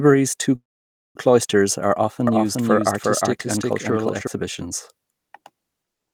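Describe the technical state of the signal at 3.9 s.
At 3.9 s the speech carries a doubled audio track (2.27–4.27 s, after "two cloysters are"): an equally loud copy trails by about 400 ms, likely a second capture path, and unlike room echo it stays dry and undecayed.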